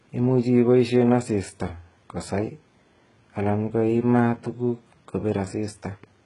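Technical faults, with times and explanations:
Throughout, HE-AAC compression: the speech has a heavily processed sound, with nothing above 11 kHz and s sounds that come out gritty and a bit metallic. That's likely a very low bitrate, around 12 kbps, where the treble is rebuilt from copied lower bands rather than coded.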